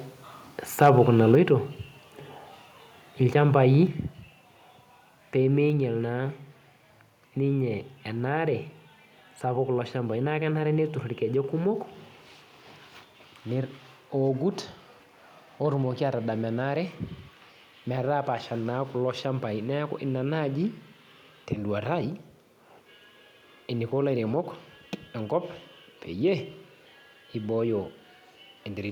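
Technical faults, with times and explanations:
0.81–1.34 s: microphone overload. The loudest peaks of the speech push about 3 dB past the converter's ceiling, and their tops are flattened. Only a small fraction of samples is cut, but those syllables gain a harsh, crackly edge. The input volume was likely set too high.
1.35 s and 3.87 s: microphone volume stepped down. At each point the speech and the background drop together by about 4 dB in a single sudden step. The first drop comes right after the distorted peaks. The call software likely lowered the device's input volume after finding the microphone too loud or clipping.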